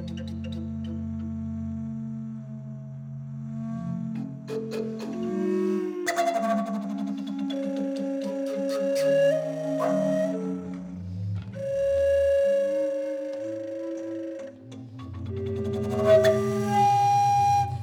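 Nothing technically wrong turns up here, so there's no fault to point to or explain anywhere in the audio.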